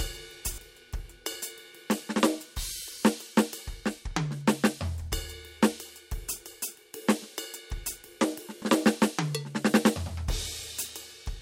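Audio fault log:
0.54–0.58 s and 8.58–8.62 s, repeated buffer: new music didn't arrive in time, so the last short block, consistent with a 20 ms buffer, played twice more with a hard join each time, giving a brief stutter and skipping about 40 ms of audio.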